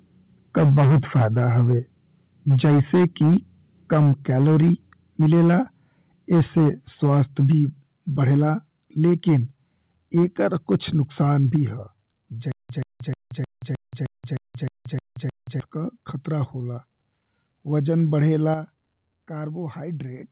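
The microphone input gain was set too high, so the speech peaks likely ran past the converter's ceiling and were flattened. The result is microphone overload: a harsh, crackly edge on the loudest syllables from 0.56 to 1.74 s, 2.49 to 3.37 s, 3.92 to 5.56 s, 6.32 to 7.52 s, 8.21 to 8.50 s, 9.04 to 9.37 s and 10.17 to 11.56 s. The first bursts drive about 9 to 10 dB past full scale and are clipped on a large share of samples. Later ones are only about 2 to 3 dB over and sound milder.

Reacting to that overload, the call software likely cut the microphone's input volume in single steps. Each microphone volume step down is an abrupt drop in voice and background together: about 3 dB at 0.58 s and 3.94 s, about 4 dB at 7.52 s and 11.56 s, and about 7 dB at 18.54 s. Several of these land inside or at the end of a distorted stretch, and the last is the most obvious fall in level. The whole clip passes through a narrowband call path with nothing above 4 kHz.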